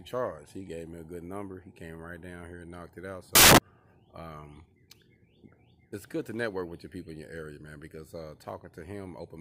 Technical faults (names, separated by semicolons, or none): samples built from the wrong bytes